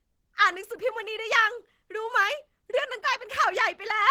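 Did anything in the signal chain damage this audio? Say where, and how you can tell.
Yes. Opus compression affects the whole clip, at the codec stage. The speech sounds plainly hoarse, grainy and somewhat muffled, yet content still reaches about 20.2 kHz. That fits Opus's hybrid speech mode, likely from encoding at around 16 kbps.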